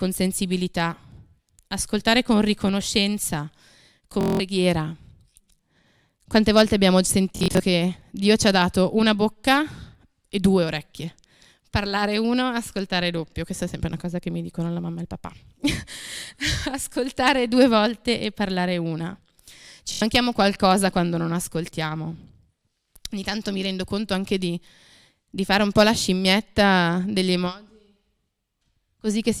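A speech recording with Bluetooth stutter at 4.21–4.40 s, 7.36–7.60 s just after "volte abbiamo", and 19.92–20.02 s just before "qualcosa quando non ascoltiamo". The receiver replays short buffered slices as a buzz while packets are missing, then resumes further on, skipping roughly 190, 140 and 90 ms.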